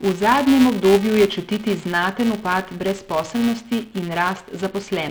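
Throughout the speech, a filter restarted on every block resets its state and begins each block from silence, leaving a small transient at every boundary. That produces a buzz at 345 Hz that rises and falls with the speech level, which fits a 128-sample block. A spectrogram would show harmonic lines at multiples of 345 Hz, and the waveform would show regularly spaced tiny spikes.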